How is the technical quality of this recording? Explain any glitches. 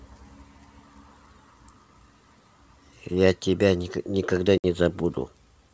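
One glitch stands out on this wideband speech: packet loss on an ADPCM call at 4.58 to 4.66 s, where about 60 ms of audio, a few packets' worth, drops to abrupt silence. The decoder's predictor and step size then restart out of step, so speech resumes slightly distorted before settling. The G.722 coding shows faint or no damage of its own.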